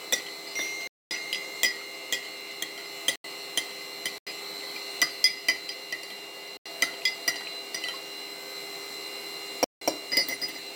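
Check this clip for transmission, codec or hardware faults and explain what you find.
Five dropouts, all blocks of digital silence: 0.87 to 1.11 s (235 ms), 3.16, 4.18 and 6.57 s (85 ms each), and 9.64 to 9.81 s (171 ms). The output buffer wasn't filled in time, which fits 4096-sample blocks, so the sound chops abruptly to nothing and back.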